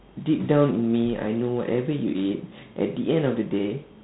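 G.726 ADPCM coding runs throughout: each sample keeps only a few bits of difference from an adaptive prediction, and that coarse step size leaves a harsh, rasping hiss riding on the speech, plainly audible and rising with level, a grain that fits 24 kbit/s. Nothing passes above 3.9 kHz.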